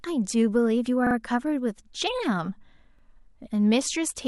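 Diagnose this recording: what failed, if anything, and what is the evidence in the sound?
Driver or buffer stage: repeated buffer. A 43 ms piece replays twice at 1.07 s, once at 2.99 s. Audio arrived late; fits a 2048-sample buffer.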